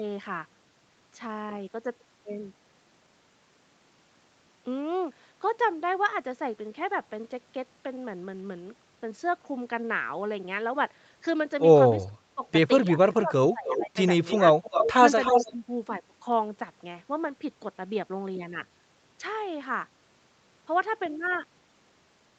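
From 12.03 to 12.44 s and again from 12.89 to 13.97 s the speech dips by roughly 30 dB and then about 20 dB, likely speech suppressed in double talk. Both sides seem to be talking at once, and the echo canceller turns the near talker down along with the echo. The talker fades or thins rather than gaining an extra copy. A shallower dip of about 10 dB returns at 15.31 to 15.65 s.

Echo leak overlaps this from 13.67 to 13.83 s, 14.25 to 14.93 s and 15.21 to 15.51 s: a copy of the speech trailing by 302 ms, about 10 dB and later about 5 dB below the speech. This is likely loudspeaker pickup the canceller left in, and unlike suppression it adds sound rather than removing it.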